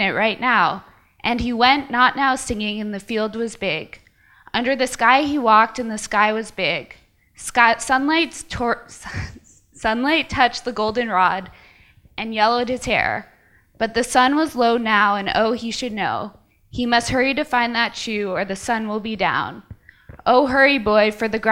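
No technical faults can be heard anywhere in the audio, and the signal stays steady and intact throughout.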